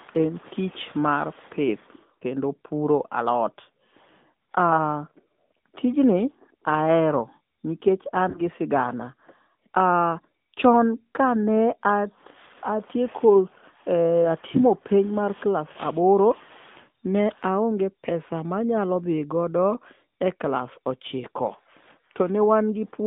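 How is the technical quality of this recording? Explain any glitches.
The recording is limited and clearly degraded: the whole clip carries AMR narrowband mobile codec damage, and there are three brief glitches from lost AMR speech frames.

The AMR narrowband mobile codec is present throughout. The speech is squeezed into a phone-style band from about 150 Hz to 3.6 kHz and rebuilt from a vocal-tract model with sparse pulse excitation, which gives it a buzzy, synthetic edge. That character fits a mid-rate mode of around 10 kbps. On a spectrogram, everything above 3.6 kHz is empty.

Lost AMR speech frames occur at 2.19–2.24 s, 8.30–8.41 s and 15.72–15.78 s. Each time, the decoder filled the missing audio by repeating its last good pitch and vocal-tract settings at falling gain. The first gap covers about 20 ms, which points to a single frame, and is heard as a quick dip. The later two each cover about 40 ms, fitting two frames, and sound like a brief smeared warble before the speech recovers roughly. 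On a waveform, each shows a short, shrinking stretch of repeated periodic cycles. On a spectrogram, the harmonics go flat and fade for that moment.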